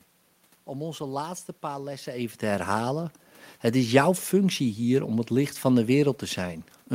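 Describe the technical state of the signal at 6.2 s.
At 6.2 s the signal is intact, with no technical fault; only the background noise of the room, which belongs to the recording itself, sits under the speech.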